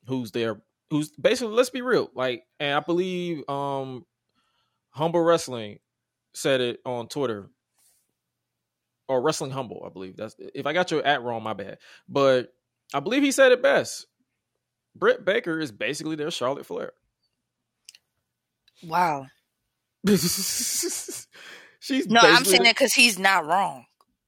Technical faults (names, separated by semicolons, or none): none